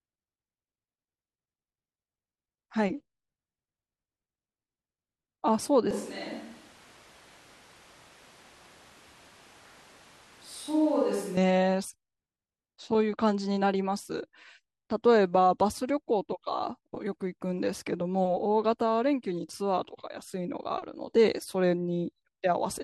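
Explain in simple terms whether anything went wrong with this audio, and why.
From 5.91 s to 11.37 s the speech turns hollow and roomy, thinner in the low end, a little quieter and noisier. This is a switch to a distant microphone, likely a camera mic replacing the close one. The sudden change in and out marks a microphone swap rather than a gradual move away.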